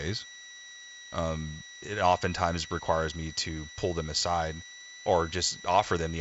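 A switching supply whistle sits under the speech for the whole clip, a thin tone near 2 kHz, wandering between about 1.93 and 1.97 kHz and around 20 dB down. A power supply's switching has dropped into the audible range. It rides alongside the lightly coloured G.722 band that stops at 7.7 kHz.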